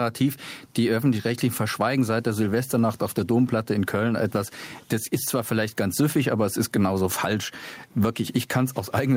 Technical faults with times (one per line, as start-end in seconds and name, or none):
0.00-9.17 gain pumping